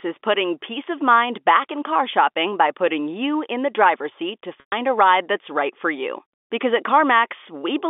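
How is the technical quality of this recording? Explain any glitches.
There's one real glitch in this speech recording, a short dropout from packet loss with pitch repetition. It comes through a G.711 telephone line, so the band runs from about 250 Hz to 3.5 kHz.

From 4.60 to 4.72 s, about 120 ms of audio goes missing, which fits roughly six 20 ms packets dropping out. The receiver fills the hole by looping the last pitch period and fading it out over about 50 ms. You hear a brief buzzy hold that sinks to silence, then the speech cross-fades back in.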